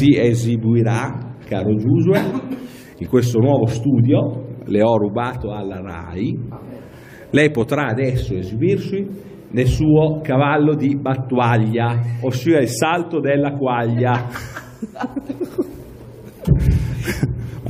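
At 15.52 s there is a single overlap between stream segments. Two adjacent segments carried time stamps that overlapped, and on joining them the player discarded roughly 19 ms of audio that had not actually been duplicated. The waveform steps abruptly from one point to a later one with nothing in between, heard as a short click or tiny skip in the sound. The placement fits a stream split into 2-second segments.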